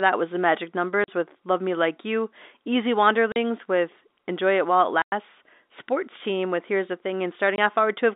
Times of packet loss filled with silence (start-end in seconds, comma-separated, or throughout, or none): 1.04-1.08, 3.32-3.36, 5.02-5.12, 7.56-7.58